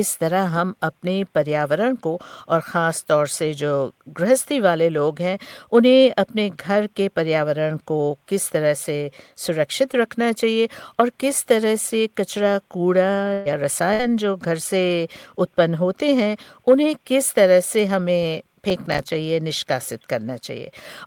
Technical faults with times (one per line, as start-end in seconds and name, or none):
13.33-13.48 burst of packet loss
13.93-14.02 burst of packet loss
18.70-19.09 processor overload crackle